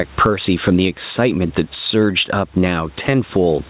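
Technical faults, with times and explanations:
Throughout, gain pumping: gain swings around 10 dB, pulling down on each loud syllable so loud and soft parts sit closer in level and sound squashed; likely an overdriven fast limiter.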